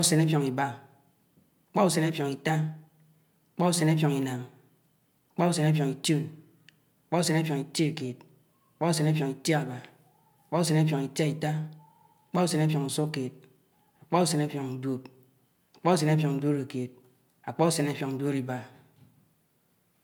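No technical faults can be heard in the speech.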